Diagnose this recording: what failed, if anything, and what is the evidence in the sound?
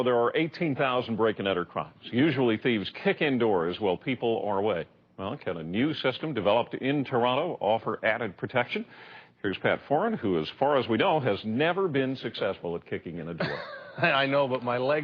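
Nothing failed in this recording, and there is no evidence in the sound of any fault at any stage.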